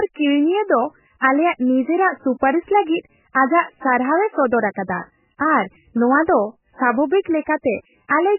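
Throughout, the speech has nothing above 3 kHz and sounds watery and swirly, with smeared attacks, likely MP3 compression at a very low bitrate, unlike simple low-pass filtering.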